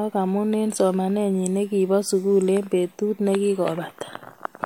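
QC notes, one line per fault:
No faults to log on this speech clip; nothing in the audio calls for a QC entry.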